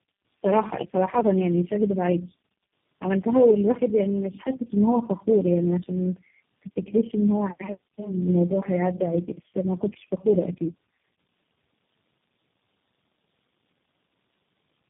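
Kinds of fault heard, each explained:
Tandem speech coding: the speech has been squeezed through several low-rate speech coders one after another, each re-coding the previous one's already damaged output, and the sound points to about four such stages, likely AMR-NB, GSM full rate and a final G.729A-type coder. Throughout the clip the voice is rough, muffled and warbly, with nothing above 3.5 kHz. A single low-rate codec would be band-limited too, but less smeared and watery than this stacked degradation.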